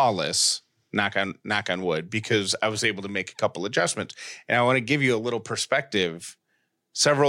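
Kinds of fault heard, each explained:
No faults detected in this speech recording.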